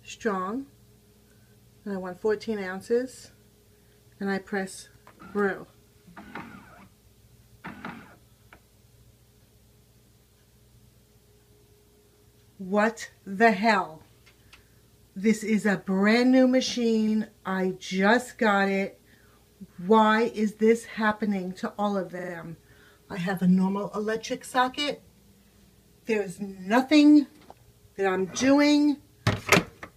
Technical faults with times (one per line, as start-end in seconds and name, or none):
17.07-17.14 repeated frames
22.18-22.32 repeated frames